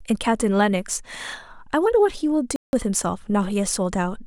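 Right from the start and all the way through, there's sample clock jitter on this speech. The converter's clock wobbles by something like a microsecond, so each sample lands a touch early or late. The error scales with how steeply the waveform is moving, which is why you hear a faint hiss or grit riding on the louder, brighter parts, sitting around 40 dB under the signal and dropping away in the pauses.

Then at 2.56 s there's a block of digital silence. The audio cuts straight to silence and comes back at 2.73 s, a hole of about 0.17 s. There's no fade at either edge, so that short dropout starts and stops abruptly. The length fits an 8192-sample buffer, so it's likely the output buffer just didn't get filled in time.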